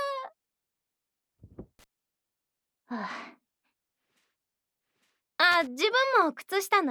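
Loose connector crackle breaks into the audio twice, from 1.79 to 1.84 s and again from 5.52 to 5.67 s, as short, irregular scratchy bursts. A worn or dirty contact is making and breaking, chopping the signal.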